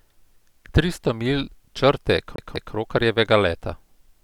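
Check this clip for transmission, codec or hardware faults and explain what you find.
One hardware fault is audible: CD stuck on one turn. It starts at 2.36 s, right after "milj črte", and lasts until 2.75 s. A scratch sends the laser back one track. A 195 ms slice of speech plays twice, with a brief mute at each jump. The result is a quick, even stutter.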